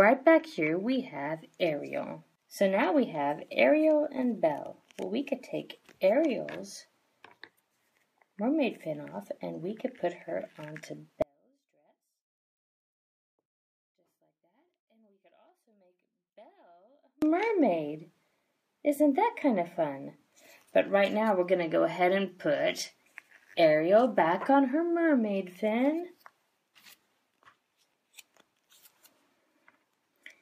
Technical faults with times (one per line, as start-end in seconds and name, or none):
11.22-17.22 one channel inverted